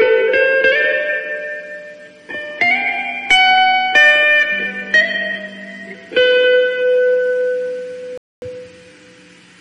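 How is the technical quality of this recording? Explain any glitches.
There is one glitch: a rebuffering stall from 8.18 to 8.42 s. The player exhausted its downloaded audio, so the sound drops to silence for about 245 ms, then resumes exactly where it stopped, with nothing skipped, only that quarter-second of time inserted.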